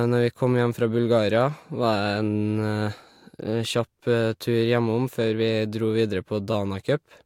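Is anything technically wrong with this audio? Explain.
Yes. At 6.52 s, repeated frames: an 8.7 ms block of compressed speech was decoded twice more, adding 17.4 ms and producing a brief stutter.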